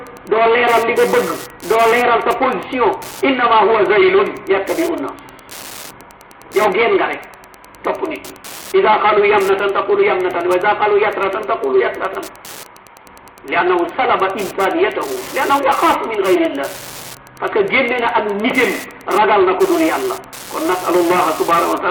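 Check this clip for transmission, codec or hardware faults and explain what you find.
One hardware fault runs through the whole clip: Wi-Fi interference. From start to finish a steady ticking sits under the sound, repeating about ten times a second, roughly 20 dB below the main signal. The spacing of the ticks matches a Wi-Fi beacon sent every 102.4 ms. A Wi-Fi radio close to the audio circuitry sends out each beacon burst, and the circuit rectifies that radio energy into an audible click at the beacon rate.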